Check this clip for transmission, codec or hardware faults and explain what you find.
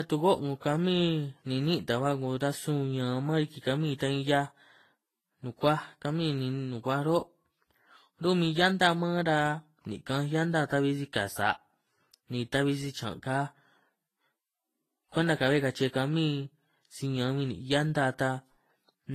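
One codec fault runs through the whole clip. Throughout, the speech has nothing above 14.2 kHz, plus two kinds of compression smear layered together. This is likely transcoding between lossy codecs. An AAC-type pass came first, then Vorbis at a low rate. Vorbis re-encoded the earlier artefacts and added its own warbly, swishy texture. The 14.2 kHz cut-off from the chain remained.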